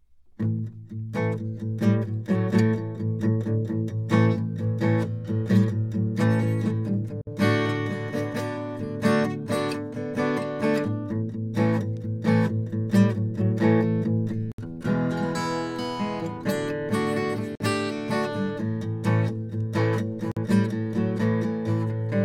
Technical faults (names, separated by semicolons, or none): gap at a join of encoded pieces